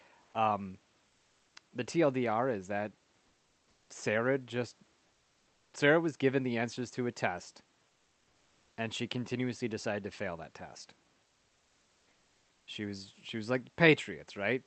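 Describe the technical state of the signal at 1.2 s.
From 1.07 to 1.55 s the room background gives way to a steady, featureless hiss at the same level: comfort noise in place of the background, likely from discontinuous transmission filling the 480 ms pause.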